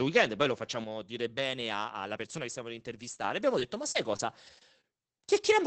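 Just after "weekend poi lo", at 0.84 s, the level drops abruptly by about 6 dB and stays there until 3.24 s, where it jumps back up. This is a sudden gain jump, most likely a digital gain setting applied from one sample to the next without a ramp. The speech and the background noise fall and rise together, with an audible step at each edge. On a waveform the envelope shows clean vertical steps, and a spectrogram shows the whole band dimming uniformly between them.

From 3.59 s to 5.25 s there is repeated packet loss, heard as a robotic sound. Six short holes break up the speech, the longest about 34 ms, with roughly 140 ms missing in total. Each hole is patched by extending the preceding sound, about 150 ms of concealment altogether, so the speech turns choppy. On a spectrogram these patches show as brief smeared or frozen harmonic stretches interrupting normal detail, and the waveform shows repetitive periodic segments at the seams. 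The call codec's band limit at about 8 kHz, which fits Opus at around 20 kbps, sits across the whole clip.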